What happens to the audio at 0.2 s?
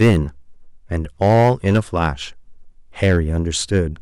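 Hard clipping runs from 0.01 s to 0.18 s, ending just before 0.2 s. The speech is driven about 8 dB past what the stage can pass, so its peaks are sliced flat, adding high harmonics heard as a harsh fuzz on the loud parts.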